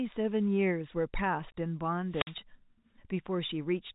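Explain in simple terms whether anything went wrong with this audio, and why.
Two things go wrong in this speech, both brief.

At 1.52 s there is packet loss filled with silence. A tiny piece of the audio, about 20 ms, never arrived. The receiver played nothing in its place. That gap fits two lost 10 ms packets. Its edges are sudden.

From 2.10 to 2.36 s there is a wireless microphone squelch dropout. The radio link from the microphone weakened. Hiss rose, then the receiver muted itself for about 52 ms to hide the noise. The sound then came back.

The sound also passes through a normal telephone line, so it is narrow and lacks crisp highs.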